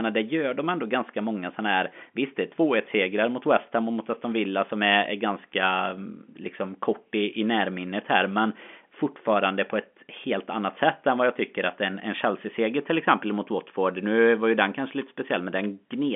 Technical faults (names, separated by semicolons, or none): none